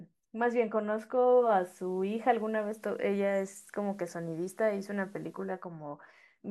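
At 1.14 s the digital radio blends to analogue, cross-fading over about 0.46 s to the FM broadcast. Hiss rises well below the speech and level shifts about 2 dB until the return at 5.70 s. The gradual fade and steady hiss distinguish it from an abrupt dropout.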